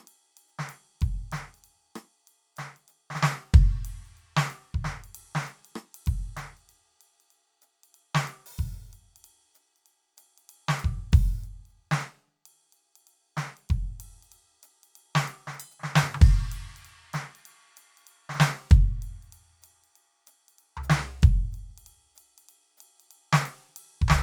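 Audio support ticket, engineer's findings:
Engineer's findings: no faults found in the music clip.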